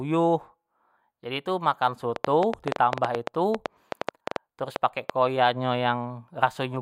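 From 2.16 s to 5.11 s, a train of clicks runs over the speech. About twenty sharp ticks arrive at roughly 7.2 per second. Their spacing is irregular, so the ticking stumbles rather than keeping time. Each click has much the same shape and stands out strongly, around 15 dB above the speech. They carry on through the pauses as well. Interference from nearby equipment or a faulty connection or power supply is the likely cause.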